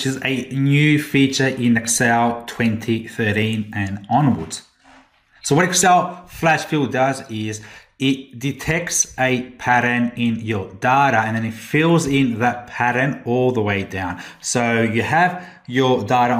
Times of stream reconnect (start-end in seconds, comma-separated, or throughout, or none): none